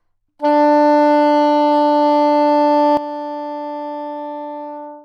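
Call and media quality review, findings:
Sudden gain jump at 2.97 s, level drops by about 12 dB in a single step and stays down to the end of the clip. Sound and background noise fall together, with no ramp. Likely a digital gain setting or bit shift applied without smoothing in the capture or mixing stage. Differs from AGC or a fade: no gradual slope, no recovery. Differs from a noise gate: the background drops along with the sound instead of being cut.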